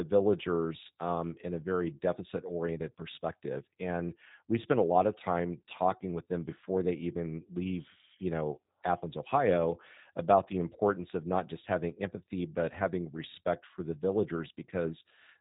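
The speech has been run through a low-bitrate G.729 codec for its whole length, and the sound fits the 8 kbit/s G.729A variant. Rather than carrying the waveform, the coder rebuilds each short frame from a vocal tract filter, a pitch predictor and a few excitation pulses, so the voice comes out plainly rough and slightly synthetic. Everything above 3.8 kHz is gone, leaving a narrow, telephone-like tone with dulled consonants.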